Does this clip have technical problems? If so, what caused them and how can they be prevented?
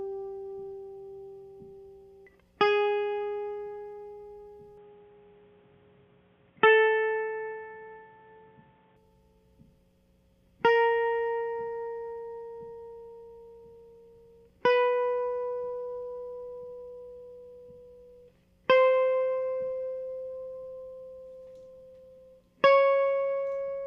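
Yes. From 4.77 to 8.96 s the music goes dull and boxy, with nothing above 3.8 kHz and a faint new noise floor well below the music, then opens up again. That's likely the input switched to a poorer device, with no gap at either change. Lock the recording input to one device and turn off automatic device switching before you start.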